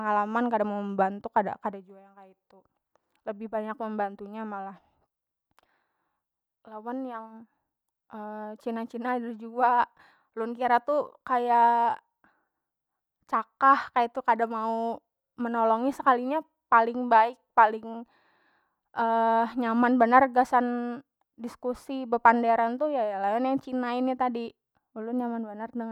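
Speech recording; no technical faults detected anywhere in the clip.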